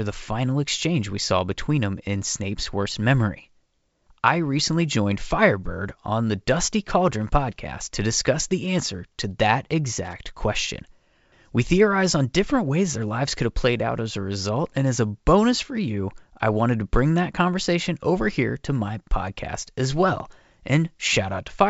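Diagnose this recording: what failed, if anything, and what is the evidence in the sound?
A loose connector crackle in the analogue wiring breaks into the speech from 10.05 to 10.13 s, a burst of irregular scratching lasting about 80 ms. A worn or dirty contact making and breaking as it shifts chops the signal on and off in rapid succession. On a waveform the speech looks sliced into ragged fragments with abrupt steps. A spectrogram shows a cluster of broadband vertical streaks across the band that the G.722 wideband coding carries, up to about 7 kHz.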